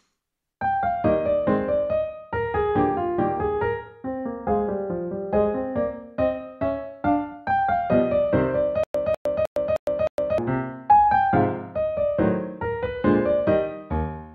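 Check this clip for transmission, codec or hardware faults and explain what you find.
One fault is present. From 8.84 to 10.38 s there is a stutter with silent gaps. A 200 ms burst repeats five times, each followed by 109 ms of dead silence. The stream likely stalled, replaying its last fragment at each retry. The intended audio there is lost.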